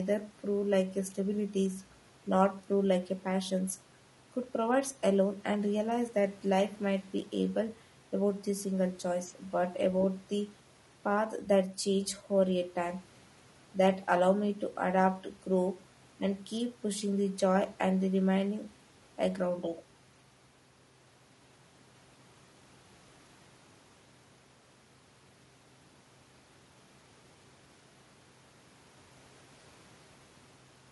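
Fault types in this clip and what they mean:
Low-delay AAC compression: the speech is rough and grainy throughout, with noise filling the gaps between harmonics, likely from AAC-ELD's short frames at about 32 kbps.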